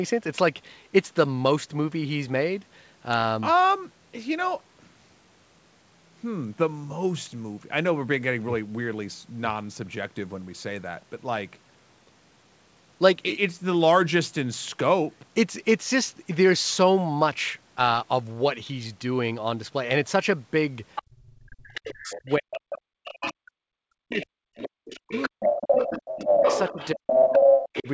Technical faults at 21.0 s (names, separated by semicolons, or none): other side's voice leaking through